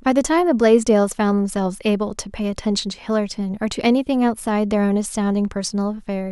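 A speech recording with nothing technically wrong with it.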